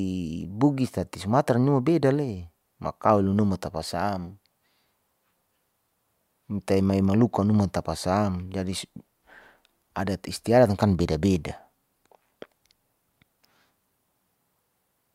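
No technical faults can be heard anywhere in the speech. Nothing in the sound suggests a problem in how it was captured or carried.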